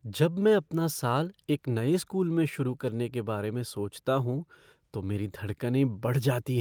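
No technical faults can be heard anywhere in the speech, and the signal holds steady throughout.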